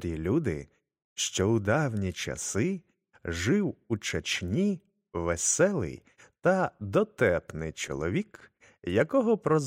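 There are no technical faults to describe at any point in the clip.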